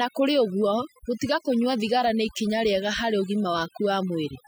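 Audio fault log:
Throughout: overdone noise removal. A noise reduction stage was pushed far too hard on a noisy recording, so any frequency band that sits close to its noise estimate is pulled right down or switched off, and the quieter components of the speech are removed along with the noise. Between phrases the background drops to near silence scattered with twinkling specks.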